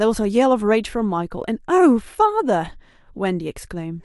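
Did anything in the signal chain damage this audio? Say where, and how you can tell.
No, no damage is audible.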